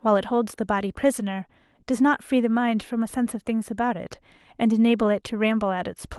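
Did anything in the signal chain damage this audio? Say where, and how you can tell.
No, nothing in the chain has hurt this speech; the WebRTC call path it went through, which sounds like Opus at a modest bitrate with the top end rolled off around 12 kHz, is just doing its normal job.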